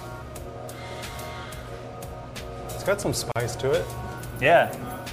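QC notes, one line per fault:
3.32–3.36 s, gap at a join of encoded pieces: continuous sound drops into a gap of about 41 ms with smeared edges, then resumes where it stopped. Separately encoded segments were butted together without removing the encoder's start delay and final-frame padding.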